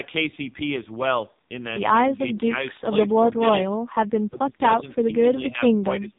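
Speech runs through the AMR narrowband mobile codec for the whole clip. Nothing above 3.8 kHz survives, and the voice has a buzzy, synthetic edge that fits a low mode near 5.9 kbps. That coarse texture is what separates it from simple low-pass filtering, which would only dull the sound. The speech is also pulled down in uneven pieces from 2.16 to 3.13 s, 3.33 to 3.83 s and 4.29 s to the end, by roughly 15 to 20 dB at worst. This is likely speech suppressed in double talk. The fades are partial and ragged rather than clean frame-length gaps, which separates them from packet loss.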